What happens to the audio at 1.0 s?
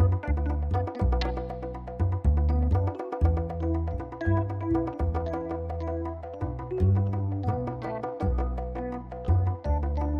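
Nothing goes wrong at 1.0 s; the audio plays through that moment intact, with no dropout, click, distortion or other fault.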